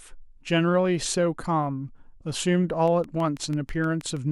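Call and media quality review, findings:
Steady ticking over speech, 2.88–4.18 s: train of clicks, about ten similar pulses at a regular 6.2 per second, peaks about 5 dB above the speech. Likely interference from nearby equipment or a faulty connection or power supply injecting repeated pulses.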